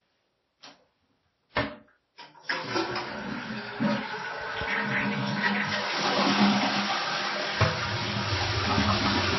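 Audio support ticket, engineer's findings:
Transcoding between lossy codecs, throughout. Nothing above 5.8 kHz. Two kinds of coding grit layered together. Likely cause: a low-rate MP3 encode, re-encoded through WMA, then MP3 again. Each pass wastes bits coding the previous pass's artefacts and adds its own. The earliest, lowest band limit persists. Component: upstream encode chain.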